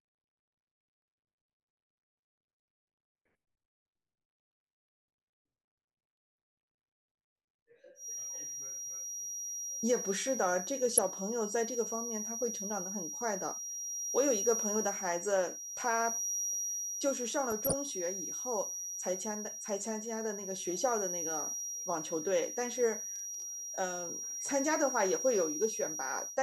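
From 7.94 s to the end, a steady 5.7 kHz feedback whistle sits a few dB below the speech, wavering slightly, most likely a loudspeaker-to-microphone loop held just short of runaway. DAB burbling appears at 10.97 s, 17.51–17.74 s and 21.60 s: reception bit errors corrupt sub-bands, giving brief blips of noise. At 23.16–23.42 s, processor overload crackle: a handful of very short buffers, under a millisecond each, miss their deadlines and drop to silence, producing gritty, hard-edged crackle.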